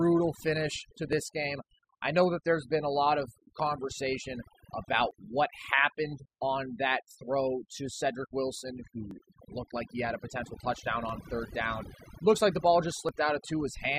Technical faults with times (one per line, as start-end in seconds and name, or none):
0.00-13.99 overdone noise removal
1.13 overlap between stream segments
5.11 overlap between stream segments
9.11 overlap between stream segments
11.09-11.11 overlap between stream segments
13.09 overlap between stream segments